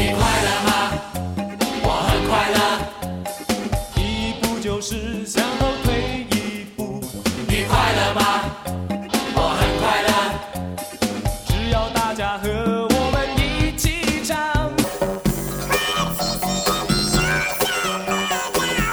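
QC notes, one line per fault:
14.84–18.92 s, planar audio read as interleaved: each 10.88 ms block is played back as its left half then right half, each at double speed, so the pace holds but the sound turns into a robotic buzz at 91.9 Hz, with no clear octave shift.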